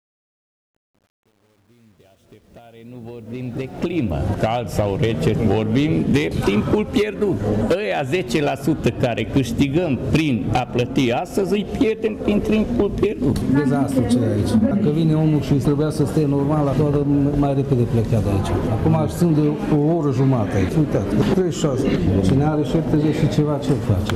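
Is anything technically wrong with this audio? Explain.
Yes. The fade-in at the start has truncation distortion on a fade, from 0.0 to 4.14 s. Here the fade rises smoothly in level, but the gain stage kept too few bits and added no dither. The coarseness fits about 9-bit resolution. Near the bottom of the fade, the waveform collapses into a few square steps. From 0.0 to 3.15 s the sound is gritty.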